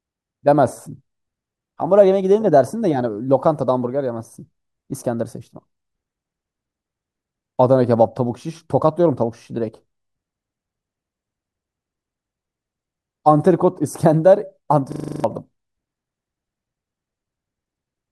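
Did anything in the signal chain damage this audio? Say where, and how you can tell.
Yes. From 14.92 to 15.24 s the speech freezes into a system hang loop at the driver or buffer stage. A single 40 ms slice repeats exactly eight times, giving a 25 Hz machine-gun stutter, and about a third of a second of speech never arrives. The host stalled while the audio hardware kept replaying its ring buffer. The repeats are identical and strictly periodic, unlike packet-loss concealment, which fades and smears its substitute audio.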